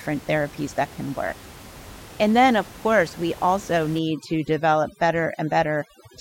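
Overdone noise removal begins at 3.99 s, right after "of course we also", and lasts to 6.21 s. Suppression set far too strong pulls down every band near its noise estimate, taking the quieter parts of the voice with it. The background drops and breaks up into twinkling specks.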